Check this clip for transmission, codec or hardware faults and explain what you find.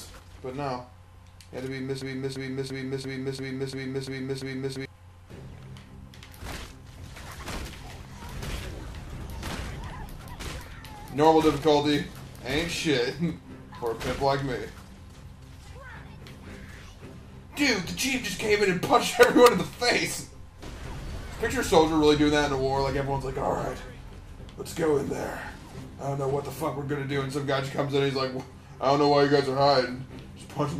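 One fault stands out. From 2.02 to 4.85 s there is a broken-record loop. The player, encoder or stream likely stalled and kept resending the last fragment it held. A 343 ms piece repeats exactly, back to back, eight times, and whatever should have played there is lost.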